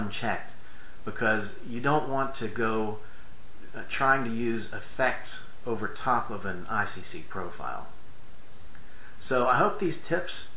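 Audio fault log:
No faults detected in this recording.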